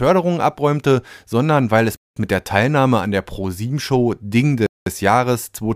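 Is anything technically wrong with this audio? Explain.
Yes. This speech clip has a gap between chunks at 1.96 to 2.16 s and again at 4.66 to 4.86 s. Each silence lasts 200 ms, and the two sit 2.7 s apart. That spacing fits 2.5 s chunks with a delayed start after each join. Nothing is lost, but the sound cuts to a short hole.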